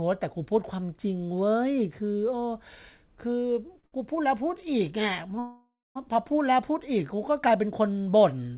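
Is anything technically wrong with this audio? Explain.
Yes. This speech has two kinds of timing fault, heard over a narrowband call path with nothing above 4 kHz, which fits G.711 mu-law at 64 kbps.

At 3.80 s and again at 3.86 s, a sound is held unnaturally long with a faint buzzy smear, about 30 ms and then 59 ms. This is a short stall from a late packet: the jitter buffer ran dry, so the receiver stretched the last sound until the packet arrived. Nothing is lost; the speech just runs later.

From 5.39 to 5.98 s the audio freezes: the last sound continues as a fading buzz, then drops into about 230 ms of silence before speech resumes where it left off. This call audio freeze was likely caused by packets held up in transit, leaving the jitter buffer empty. The receiver filled 561 ms, inserting a gap without dropping any speech.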